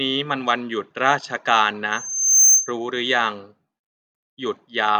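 From 1.92 to 2.72 s, the microphone picks up its own loudspeaker, and the loop gain exceeds one at 6.3 kHz, causing loudspeaker feedback squeal. A thin, piercing tone swells over roughly half a second until it stands around 10 dB above the speech.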